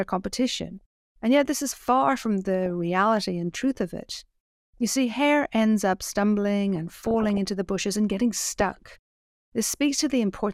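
DAB burbling hits at 0.78 to 0.81 s, 2.66 to 2.70 s, 4.78 to 4.91 s, 6.76 to 7.38 s and 8.61 to 8.97 s. Bit errors slip past error correction. Wrong samples then land in single sub-bands. The speech gets short blips of noise, longest around 7 s.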